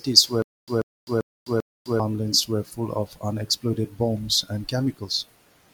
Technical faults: stutter with silent gaps

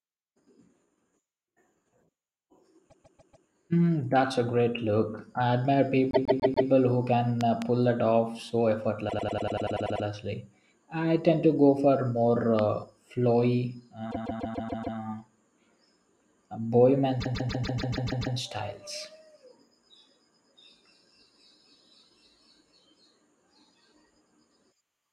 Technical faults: repeated frames; loud pop

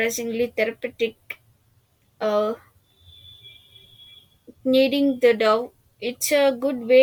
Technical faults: none

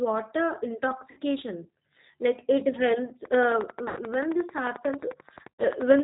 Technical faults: G.729 codec; VoIP packet loss concealed by the speech codec

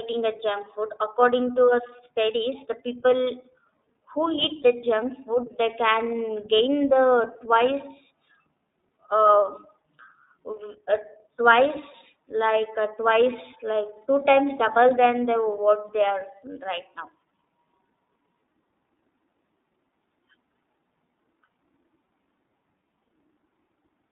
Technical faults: iLBC codec

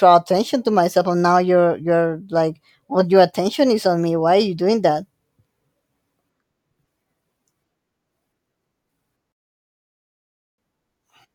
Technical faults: rebuffering stall

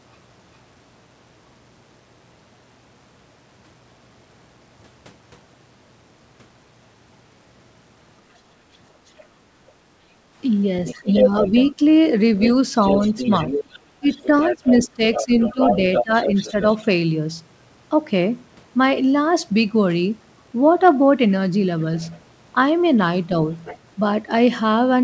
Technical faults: other side's voice leaking through; background gated by the echo canceller; speech suppressed in double talk

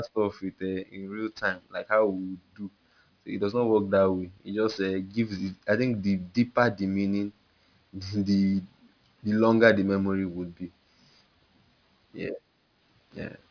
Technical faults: aliasing

